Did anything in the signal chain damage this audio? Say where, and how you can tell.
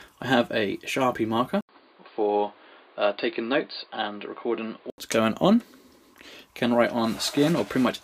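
Yes, and it looks like the input switched to a poorer device at the driver or device-selection stage. At 1.61 s there's an 80 ms gap, then everything above 4.8 kHz disappears and a new noise floor, roughly 30 dB under the signal, comes in. It stays that way until 4.98 s. The level hardly moves, so this isn't gain riding. It's most likely a narrower-band mic or a headset's call profile taking over and then handing back.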